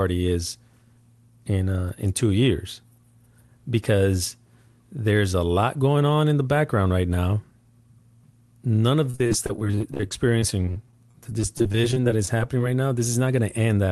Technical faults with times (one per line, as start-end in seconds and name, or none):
9.10-12.60 repeated packet loss (robotic sound)